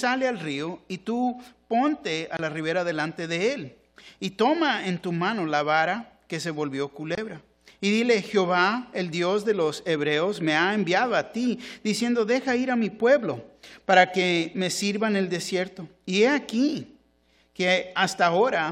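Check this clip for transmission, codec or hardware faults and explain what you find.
Two brief dropouts are audible, both the same fault. Block of digital silence at 2.37–2.39 s and 7.15–7.18 s: each time the output buffer likely went unfilled and a run of silence, about 23 ms, fits a 1024-sample block, replaced the audio. The abrupt cut and return are heard as a short pop-like hole.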